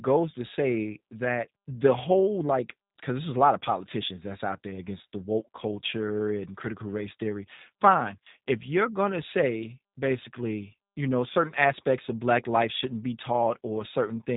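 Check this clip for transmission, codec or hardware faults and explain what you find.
One codec fault runs through the whole clip: this speech has been through a G.729 codec. It sounds like the speech was rebuilt from a vocal tract filter and a pitch predictor plus a handful of pulses per frame, rather than from the actual waveform, and that detail budget fits an 8 kbit/s G.729A link. The damage is plainly audible: a rough, slightly synthetic edge on every syllable, and nothing above about 3.8 kHz, so sibilants come out dull.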